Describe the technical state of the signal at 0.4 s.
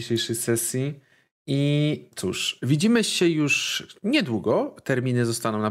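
At 0.4 s the speech signal is intact, with no audible fault at that moment.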